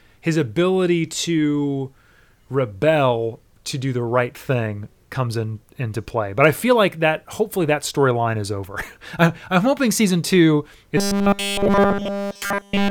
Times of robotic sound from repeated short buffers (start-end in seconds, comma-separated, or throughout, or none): 10.97-12.90